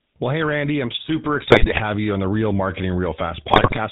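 The speech runs through the GSM full-rate codec for its whole length. The vocal-tract model is excited by regularly spaced pulses, so the speech takes on a plainly audible buzzy, gravelly roughness, and nothing above 4 kHz survives, which fits the 13 kbps full-rate coder.

GSM bit errors break in from 1.38 to 1.79 s, between "I'm super" and "you on the", and again from 3.50 to 3.79 s. Corrupted filter, pitch and gain parameters distort the spectrum and spike the level frame by frame, producing squawks, pops and gargling.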